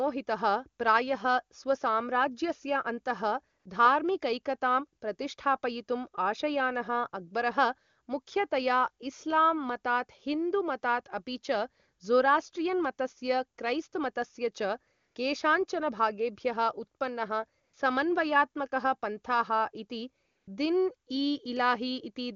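AMR comfort noise appears at 3.59–3.65 s, 14.97–15.15 s, 17.63–17.73 s and 20.25–20.47 s. Transmission paused, and smooth synthetic hiss replaced the real background.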